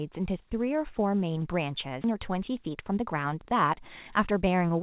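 A skip ahead at 2.04 to 2.06 s jumps this speech forward with no gap filled in: about a second of audio, already queued behind later packets, was discarded, and the sound on either side of the jump is joined almost directly. A jitter buffer speed-up follows from 2.13 s to the end at 4.82 s, where the receiver, holding more delay than it targets, repeatedly cut out pitch-period-sized pieces, about a third of a second in total, so the speech runs at 111% speed at unchanged pitch and sounds hurried. Throughout, the call path's narrowband sound, with nothing above 4 kHz, points to a G.711 A-law codec.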